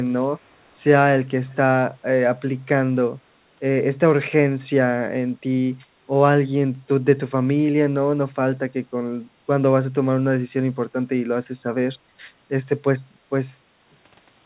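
Speech carried over a narrowband call path, with nothing above 4 kHz. From 1.49 to 1.56 s a very faint copy of the speech trails the original by 258 ms, likely an echo leak from a loudspeaker past the far end's echo canceller.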